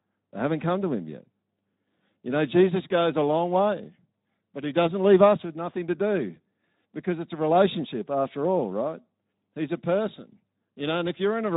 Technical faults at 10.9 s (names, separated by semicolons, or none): Speex codec